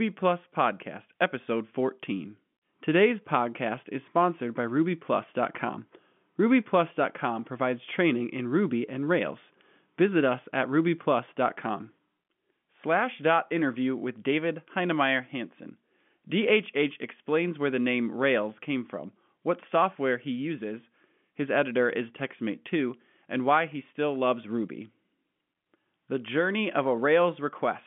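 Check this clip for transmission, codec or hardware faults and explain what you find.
Nothing goes wrong in the signal: the speech sits within the narrow band of ordinary G.711 telephone coding, about 150 Hz to 3.4 kHz, with at most a faint trace of that format's level-following quantisation noise.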